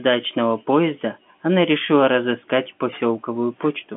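Nothing stood out on listening to this telephone-band speech.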